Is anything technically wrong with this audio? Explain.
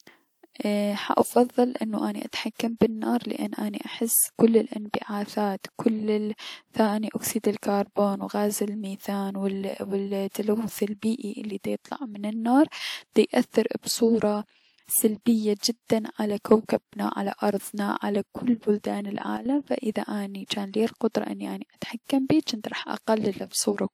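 Yes. After "ارضنا على كل بلدان", from 19.37 to 19.46 s, a sudden gain jump drops speech and background together by about 10 dB. This is likely an unramped gain change.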